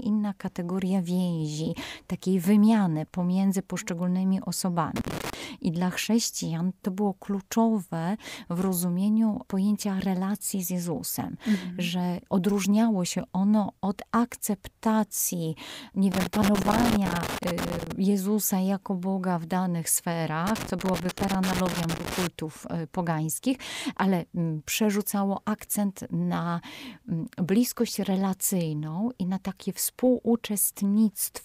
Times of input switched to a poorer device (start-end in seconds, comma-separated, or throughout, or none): none